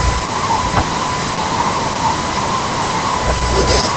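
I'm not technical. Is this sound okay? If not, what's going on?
No. Throughout, the speech carries Opus voice compression, the squeezing used by internet calls to save data. The encoder rebuilds the voice from a simplified model and throws away everything above about 8.7 kHz, so it sounds muffled, a little hoarse and faintly robotic. Unlike a simple muffled recording, the roughness is woven into the voice itself rather than just dulling it, which marks it as the work of a speech codec.

Separately, from 0.67 to 0.80 s there is hard clipping. For that brief moment the sound was louder than the recording could hold, so the tops of the waveform were chopped flat. You hear it as a short harsh crackle or fuzz on that loud spot. What sets it apart from the codec damage is that it comes and goes with the loudness, hitting only that burst instead of colouring the whole clip.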